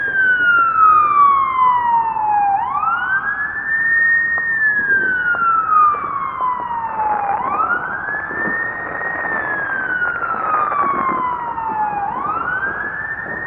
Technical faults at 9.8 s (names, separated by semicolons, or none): none